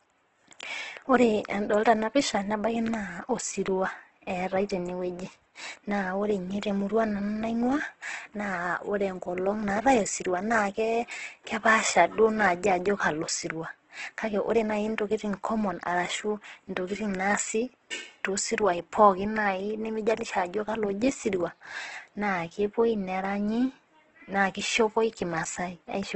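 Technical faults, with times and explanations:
Throughout, Opus compression: the speech sounds grainy and rough, with noisy filler where fine detail should be, and nothing above 8.1 kHz. The likely cause is Opus in its music mode at very low bitrate, around 12 kbps, filling starved bands with noise.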